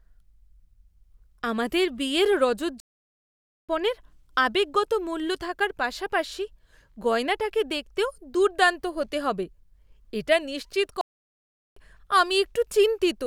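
The player likely ran short of data or had its thread blocked, producing a playback stall: the speech cuts out mid-flow into silence from 2.80 to 3.69 s, about 0.89 s, and again from 11.01 to 11.76 s, about 0.75 s, before resuming.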